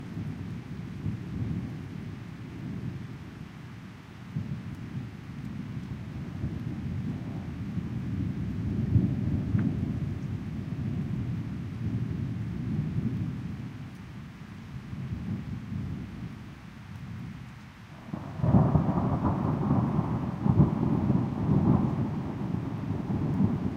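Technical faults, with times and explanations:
8.43 s, compressed frames skipped: the sound lurches forward, and roughly 150 ms of audio is simply gone. Whole blocks of the compressed stream were never played, either missing or rejected by the decoder as damaged, so playback resumed several frames later. The gap fits about four frames of 32 ms each.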